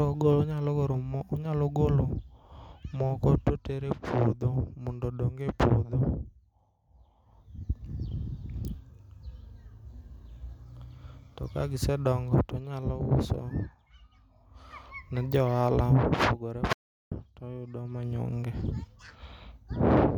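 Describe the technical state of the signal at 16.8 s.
At 16.8 s the speech sits inside an audio dropout to silence running from 16.73 to 17.12 s, roughly 0.39 s of silence with no room tone, likely from the input being lost while recording continued. The waveform flatlines and the spectrogram shows an empty vertical band until "toyudo manyonge" resumes abruptly.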